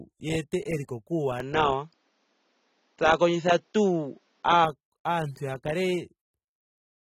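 From the start and through to the end, the audio carries audible AAC compression damage, likely from AAC-LC coding at a low bitrate of about 27 kbps. Nothing is left above 16.6 kHz, and the coder's coarse quantisation of frequency lines leaves the speech dull and smeared, with a warbling, fizzy texture on sustained sounds and sibilants. That points to a bit budget too small to keep fine spectral detail intact.

At 1.40 s, just before "aantu ya", the input switches to a poorer device, likely another microphone or a headset call profile. There is no gap at the changeover. The band narrows at once to nothing above 7.2 kHz, so the sound turns boxy and muffled. The level shifts by around 5 dB, and a new noise floor sits roughly 45 dB under the signal. At 4.65 s the wider, clearer input returns.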